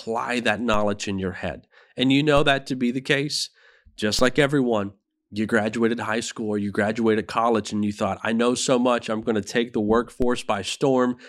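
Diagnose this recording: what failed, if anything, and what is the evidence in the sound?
At the converter, or where an offset input is switched in, the waveform's zero line jumps by about -18 dBFS in a DC step at 0.74, 2.37, 4.19 and 10.22 s. Each jump is a low thump under the speech, then fades as a 2 Hz high-pass drains the offset.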